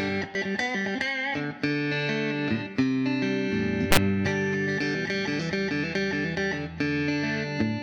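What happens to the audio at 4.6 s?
Nothing goes wrong at 4.6 s; the audio runs through that moment intact, with no audible fault.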